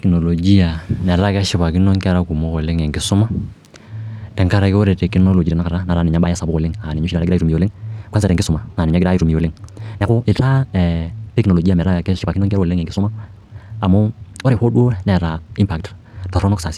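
From about 5.34 s to the end, the speech suddenly rushes ahead at roughly 1.8 times its earlier pace while the pitch stays put. This time-stretched section was likely produced by software squeezing the audio by dropping short pieces.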